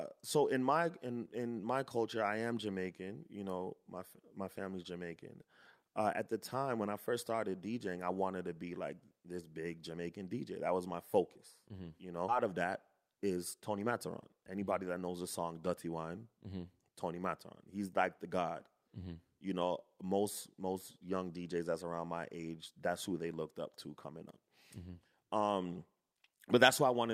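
At 12.29 to 12.31 s the speech has a skip ahead. A stretch of roughly a second was dropped while later audio was already queued. Nothing fills the gap. Playback lands directly on the later material. The two sides meet almost seamlessly, so the listener hears a sudden jump rather than a pause. Whatever was said in that second is simply gone, and the flow of speech breaks abruptly.

From 12.44 to 14.52 s comes a jitter buffer speed-up. After the jump, the buffer held more audio than its target. To shrink the delay, the receiver cut out many tiny slices, each one or a few pitch periods long. About a fifth of a second was removed in total. The speech runs at 108% speed with unchanged pitch. It sounds slightly hurried and rushed for those two seconds.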